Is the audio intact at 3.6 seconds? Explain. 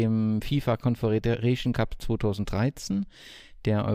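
Yes, the audio is intact at 3.6 seconds, with no audible fault at that moment.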